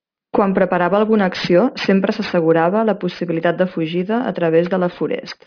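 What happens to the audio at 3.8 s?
At 3.8 s the aliasing that runs through the whole clip is present. The speech points to a drop from 44.1 kHz to 11 kHz without an anti-alias filter, so content above 5.5 kHz folds back downward, leaving gritty, metallic sibilants, with the aliased content roughly 20 dB below the speech.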